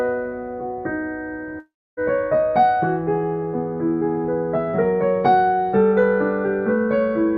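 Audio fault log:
1.59–1.99 s, long network dropout: the sound smears into a fading buzz, then silence. It resumes with about 0.38 s gone, likely from lost packets.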